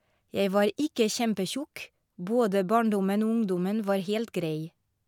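A speech recording with nothing technically wrong to report at any point.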